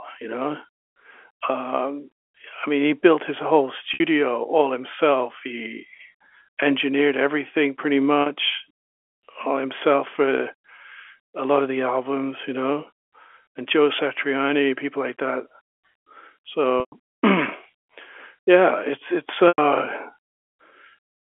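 Packet loss with pitch repetition hits the telephone-band speech at 3.94 s (60 ms), 8.22 s (40 ms), 16.8 s (120 ms) and 19.48 s (100 ms). The receiver loops the last pitch period, so the two short gaps sound like a held buzz. On a spectrogram they show as flat, frozen harmonics. The two longer gaps fade into a waveform dip before the speech cross-fades back in.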